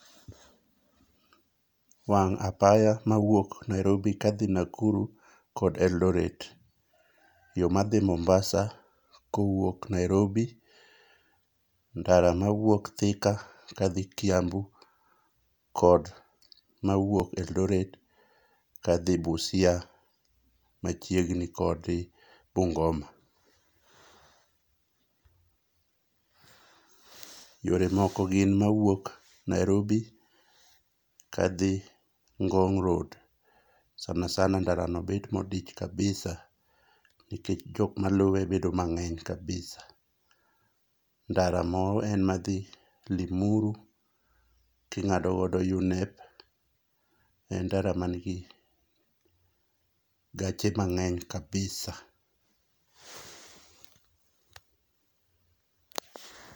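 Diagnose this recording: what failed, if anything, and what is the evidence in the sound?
Brief clicks at 7.19, 17.20, 27.20, 37.21 and 47.22 s, every 10 s, in the speech: overlapping chunks in buffering, each join replaying about 6.5 ms.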